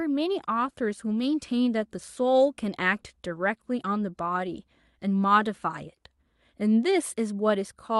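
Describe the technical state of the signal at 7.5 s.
At 7.5 s the speech signal is intact, with nothing beyond the ordinary band-limiting and coding texture of a working call path, which fits an Opus stream carrying audio up to about 12 kHz.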